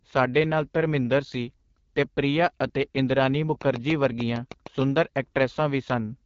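From start to finish the speech carries the signature of the AMR wideband (HD Voice) codec. The band stops near 7.4 kHz, and the top band above about 6.4 kHz sounds like shaped noise rather than real detail, because the codec synthesizes that region instead of coding it. The damage is plainly audible. Voiced sounds come through rough and raspy, as the pulse-driven vocal tract model runs short of bits. That roughness fits the 8.85 kbit/s mode, the second-lowest rate.

From 3.62 s to 4.83 s a train of clicks sits on top of the audio. There are about ten of them, evenly spaced at roughly 6.7 per second. Each has much the same short, sharp shape and peaks at about 10 dB above the signal, so they stand out as a steady ticking that the speech does not mask. The regular pace and similar shape point to a likely cause in interference from nearby equipment or a struggling interface injecting a pulse on a fixed cycle.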